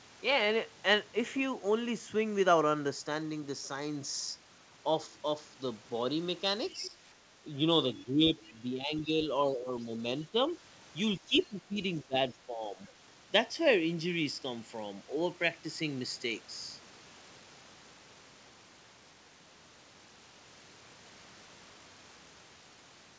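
Around 6.7 to 6.86 s there's a faint second voice underneath, roughly 25 dB below the talker: the other side's voice leaking through, most likely because the echo canceller didn't fully strip the loudspeaker playback out of the mic signal. It comes back as brief scraps at 7.96 to 8.04 s and 8.44 to 8.53 s, the second even quieter at around 30 dB down.

Overlapping that first scrap, from 6.72 to 6.96 s, the talker dips by up to about 10 dB. That's speech suppressed in double talk: with both sides talking at once, the canceller likely couldn't tell the near voice from the echo and turned everything down. A longer stretch follows from 7.89 to 9.9 s, with about a second of it pulled down by up to about 10 dB. There's a short, shallower dip of about 5 dB at 10.32 to 10.39 s, then another long one from 11.17 to 12.79 s, again with about a second sunk by up to about 10 dB. Throughout, the audio is band-limited with nothing above 8 kHz, which fits a G.722 wideband call path.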